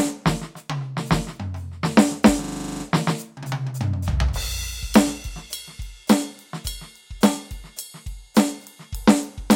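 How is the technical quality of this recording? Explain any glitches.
The music has one clear glitch. From 2.44 to 2.84 s there is a system hang loop: the playback system stalled while the audio hardware kept replaying its ring buffer, so a 40 ms fragment repeats ten times at 25 Hz. The result is a brief, rigid buzzing stutter, and the music then resumes with essentially nothing missing.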